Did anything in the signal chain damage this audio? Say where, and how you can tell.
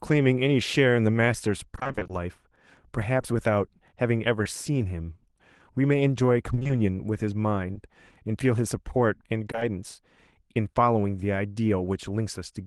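Yes. The damage is at the network stage, where packets were lost. The worst stretches are 1.75 to 2.11 s and 6.55 to 6.71 s. There, repeated packet loss leaves 20 ms holes, nine in the first stretch and four in the second, half the span concealed. Repeated patching makes the sound choppy, with pieces missing.

Short concealed packet loss, also from the network, appears at 3.21 s, 4.43 s and 7.73 s, plus three back-to-back holes from 9.51 to 9.63 s. Each 20 ms gap was filled by extending the previous sound, then blended back. You hear brief smears or wobbles.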